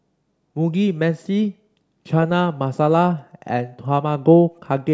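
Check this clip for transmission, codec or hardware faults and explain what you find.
Nothing here points to a transmission, codec or hardware problem; the speech comes through intact with no dropouts, glitches or damage to catch the ear.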